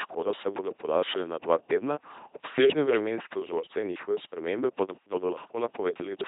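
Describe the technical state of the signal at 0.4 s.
At 0.4 s the speech has a buzzing, mechanical robot quality with no content above about 3.8 kHz. This is LPC-10 vocoder damage, present throughout the clip. It rebuilds each moment from a buzz or noise source through a simple vocal-tract filter, which fits a 2.4 kbit/s rate.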